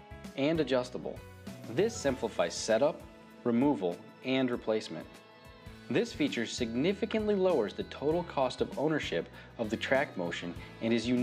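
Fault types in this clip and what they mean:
No technical faults are audible.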